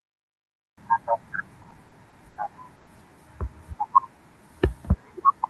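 Repeated stalls (stutter) run from 1.63 to 2.38 s in this speech clip: five short gaps, the longest 70 ms, together about 150 ms or a fifth of that stretch. Packets arrived more slowly than playback, so the receiver repeatedly stretched the last sound, making the speech drag without losing anything. A call audio freeze follows from 2.76 to 2.89 s, where 110 ms of continued, fading sound holds the speech in place without dropping to silence before it resumes where it stopped. The likely cause is a packet delay of about 110 ms that emptied the jitter buffer, inserting a pause rather than removing any audio. Both faults arise in the Opus call path, whose audio band extends to 12 kHz.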